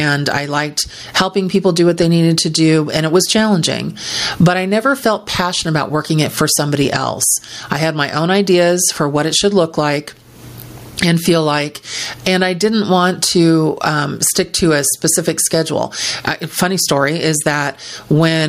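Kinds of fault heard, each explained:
Gain pumping: the level swings by around 25 dB, leaving loud and quiet passages squashed together; likely caused by input gain set far too high, with a fast limiter clamping down on each loud sound.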